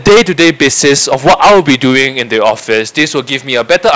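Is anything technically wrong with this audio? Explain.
Yes. Hard clipping runs through the whole speech clip: the signal overdrives a stage by about 21 dB, flattening roughly a tenth of samples into a harsh, fuzzy distortion on every loud syllable.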